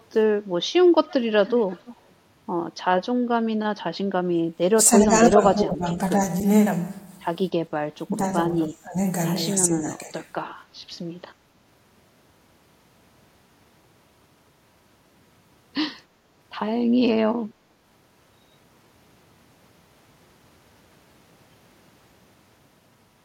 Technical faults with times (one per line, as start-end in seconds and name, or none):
0.12-0.21 echo leak
1.09-1.96 echo leak
4.34-4.46 background gated by the echo canceller
4.76-6.00 speech suppressed in double talk
8.08-8.20 speech suppressed in double talk
8.53-8.98 speech suppressed in double talk
9.68-10.17 speech suppressed in double talk